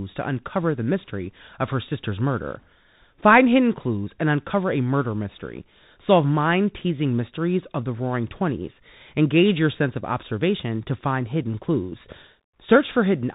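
Speech heard through a Bluetooth CVSD headset codec, for the whole clip. Nothing above 4 kHz survives, so it sounds narrow and muffled. S sounds turn scratchy, and a granular hiss sits underneath. The damage is plainly audible and fits a 64 kbps CVSD link.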